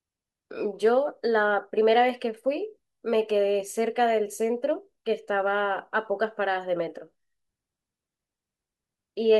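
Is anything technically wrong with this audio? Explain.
No, nothing in this recording sounds technically wrong.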